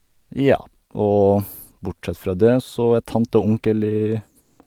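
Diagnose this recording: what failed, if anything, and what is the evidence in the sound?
The codec likely stopped transmitting during pauses (discontinuous transmission, as in Opus DTX), leaving comfort noise in place of the background from 0.00 to 0.29 s and 4.41 to 4.59 s. The result is steady, featureless noise about 50 dB down, about 3 dB quieter, then about 4 dB louder, than the real ambience.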